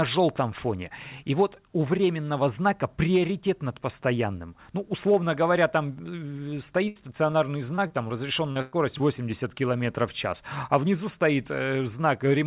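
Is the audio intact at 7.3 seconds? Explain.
No. A short concealed packet loss hits at 7.31 to 7.35 s: about 20 ms of the call arrived too late for the decoder, so the receiver extended the preceding sound to fill the gap, then blended back. It sounds like a brief smear or wobble.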